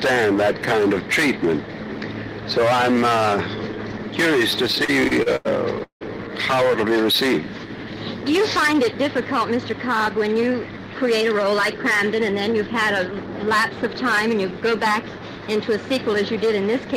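From 4.67 to 6.03 s the audio drags and stutters through twelve brief holds, the longest about 170 ms. This is repeated stalls (stutter): late packets kept emptying the jitter buffer, and the receiver stretched the last sound to cover about 414 ms, nearly a third of that stretch.

Between 6.68 and 6.71 s one sound is held slightly too long. A short stall from a late packet left the buffer empty, so about 16 ms was filled before playback resumed where it stopped.

From 11.11 to 12.56 s the audio runs about 5% fast at unchanged pitch and sounds hurried. This jitter buffer speed-up trimmed about 70 ms of pitch-period-sized pieces to reduce excess buffered delay.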